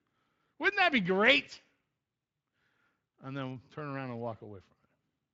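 Nothing goes wrong here: it's speech carried through the Speex codec at what sounds like a fairly generous setting, with no faults to point out along the way.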